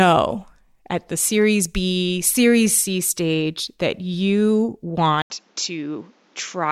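Speech that, right after "stage that you" at 5.22 s, drops out for about 80 ms and then comes back duller and a few dB quieter, with nothing above 7.6 kHz and a faint new noise floor to the end: the input likely switched to a poorer device.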